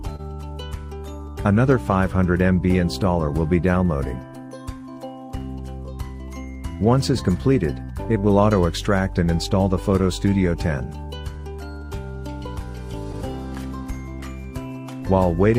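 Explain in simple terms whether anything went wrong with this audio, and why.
Something did go wrong, and it runs through the whole clip.

The first problem is clock drift between sender and receiver. Every device keeps time with its own small clock. Here the sending device's clock ran about 2 percent slower than the receiving one. So the receiver kept running short of audio to play. It had to make up the gap somehow, over and over, for the full length of the recording.

That gap was filled by repeated timing corrections. From 0.02 s to 15.50 s, the receiver kept repeating tiny pieces of sound to stay in step. All of them went the same way, stretching rather than cutting. They came at uneven spacing. Together they added roughly a third of a second, and the audio plays at 98 percent of its proper speed. Each correction is small. You might notice small hiccups or a slightly uneven pace.

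Right at the start there is also a short stall from a late packet. Audio travels in small bundles, and one arrived late. From 0.16 s to 0.21 s the receiver had nothing new to play. It held the last bit of sound for 27 ms until the bundle showed up. Then it carried on from the same place. Nothing was lost, but that moment is drawn out and may have a brief buzz or dip.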